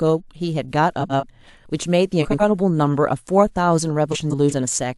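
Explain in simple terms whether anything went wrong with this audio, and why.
Frames out of order: small chunks of the speech reached the decoder in the wrong sequence and were played back that way. At 1.00 to 1.23 s and again at 2.21 to 2.43 s, two neighbouring pieces of about 93 ms each swap places. At 4.12 to 4.53 s, the swapped pieces are longer, about 186 ms each. Each spot sounds like a brief garbled flutter. Nothing is lost; the sound is just reshuffled.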